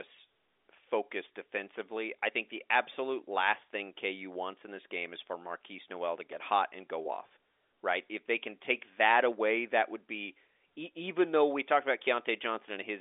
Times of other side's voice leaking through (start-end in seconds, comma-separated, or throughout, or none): none